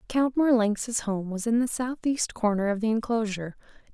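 No technical faults can be heard anywhere in the recording; the signal stays steady and intact throughout.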